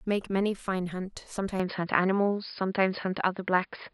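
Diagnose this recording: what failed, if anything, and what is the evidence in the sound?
From 1.6 s to the end the speech turns duller and boxier, with nothing above 5.1 kHz, a level shift of a few decibels and a faint new noise floor, with no gap at the change. This points to the input switching to a poorer device, likely at the driver level.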